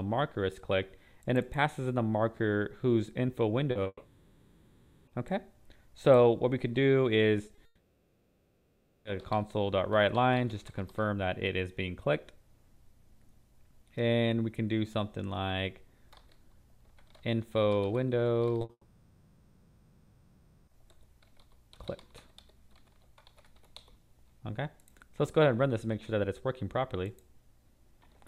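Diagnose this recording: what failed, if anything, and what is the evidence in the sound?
The network stage failed. Short concealed packet loss appears at 3.71, 3.83, 7.47, 7.55, 18.61 and 18.65 s. Each gap lasts 20 to 40 ms, and the receiver's concealment extends the preceding sound and then blends back, leaving a brief smear or wobble. What sets these apart from a dropout is their brevity: real audio resumes within a few hundredths of a second. Each pair also comes just before a long gap.

The long network dropouts are at 3.87–5.09 s (1.2 s), 7.65–9.07 s (1.4 s) and 18.71–20.69 s (about 2 s). In each, the last sound is stretched into a fading buzz or hiss. After the first and third, a brief silence of about 40 ms and 60 ms follows before the audio returns. The material from those spans never comes back. The likely cause is a stall in packet delivery rather than a local buffer fault, since concealment and not a clean mute covers each gap.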